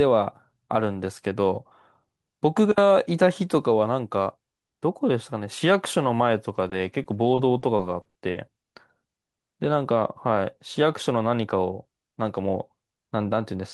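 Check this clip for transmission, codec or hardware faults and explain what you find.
Repeated packet loss (robotic sound) runs from 6.55 to 8.37 s. Lost stretches, the longest 60 ms, are patched by stretching the preceding sound, about 260 ms in all, so the speech turns choppy. Spectrograms show smeared, repeated frames; waveforms show abrupt joins.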